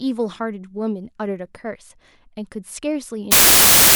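From 3.32 s to the end at 3.95 s, the decoder has a wrong sample width fault: it takes the stored data in smaller chunks than they were written in, which fits 32-bit samples being read as packed 24-bit ones. Many reconstructed values straddle two original samples, so the speech collapses into loud, harsh noise with a faint trace of the signal underneath, played back at 0.75 times speed and correspondingly lower in pitch.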